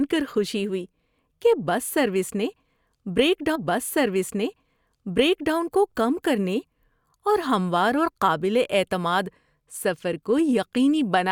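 At 3.55 s the speech jumps back with a small blip and replays about 2 s of itself, running until 5.55 s, just before "کو کم کرنے". This is a stream segment repeated: the player fetched or queued the same segment twice.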